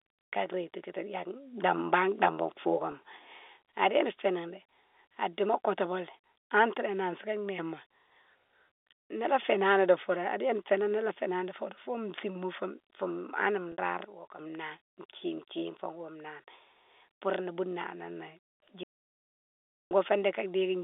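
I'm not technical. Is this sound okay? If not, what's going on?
No. It has three kinds of fault. The speech itself comes through a telephone-style line, so it sounds narrower than a studio recording.

Sudden gain jump: the volume was most likely changed instantly, with no gradual fade. From 1.34 to 3.62 seconds the sound, background hiss included, abruptly gets louder, then snaps back down. From 14.05 to 14.39 seconds the opposite happens: everything suddenly drops much quieter before returning. Each switch is abrupt and may bring a small click.

Packet loss with pitch repetition: small chunks of audio went missing in transit, and the receiving end patched each hole by repeating the last bit of voice it had. At 2.92 to 2.94 seconds the gap is brief, so you hear a slightly held, buzzy moment. At 13.72 to 13.78 seconds the gap is longer. The repeated sound fades away, leaving a tiny hole, and then the speech blends back in.

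Audio dropout to silence: the incoming audio was cut off, most likely by a dropped connection or a brief mute, while recording carried on. From 18.83 to 19.91 seconds, roughly a second, there is dead silence, with even the faint room background gone. Whatever was said during that second is lost and cannot be recovered.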